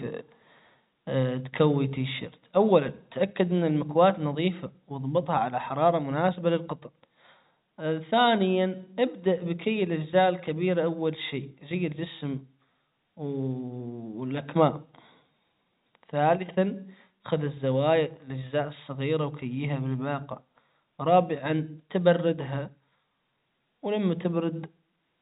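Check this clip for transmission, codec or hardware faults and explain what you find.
No transmission, codec or hardware faults can be heard here.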